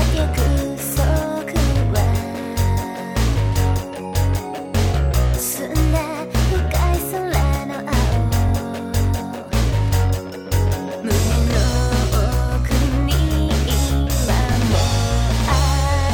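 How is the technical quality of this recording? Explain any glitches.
The recording has one recurring glitch: overlapping chunks. It appears at 2.44–2.46 s, 5.46–5.49 s, 8.49–8.51 s, 11.51–11.54 s and 14.54–14.56 s, about every 3 s. The audio was handled in 3-second blocks, and each block began slightly before the previous one ended. So a 25 ms slice plays twice at every join. You hear a click or stutter at each point, a regular hitch in the sound.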